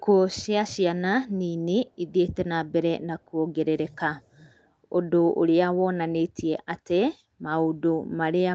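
From 4.22 to 4.69 s there is an echo leak. A faint, delayed copy of the speech surfaces behind the talker, trailing by about 0.41 s. It sits far below the voice, a very quiet ghost rather than a clear repeat. The likely cause is a loudspeaker on one side of the call. Its echo canceller missed part of what the microphone picked up, and that residue was sent back. The whole clip, echo included, stops at 8 kHz.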